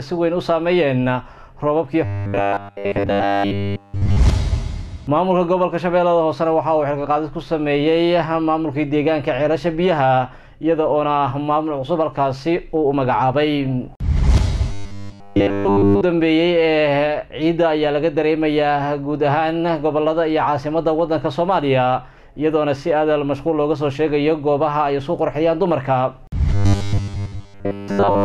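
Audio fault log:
2.05–4.17 s, 14.72–16.01 s and 26.54–28.25 s (running to the end): robotic sound from repeated short buffers. Each stretch becomes a rigid, metallic buzz pitched at 100 Hz. The likely cause is a starved audio stream in which a roughly 10 ms slice is looped over and over while nearly all the new audio is skipped. A spectrogram shows flat, evenly spaced harmonic lines every 100 Hz, and the waveform shows identical 10 ms cycles.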